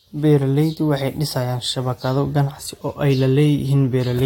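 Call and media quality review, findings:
Nothing stood out on listening to this speech recording.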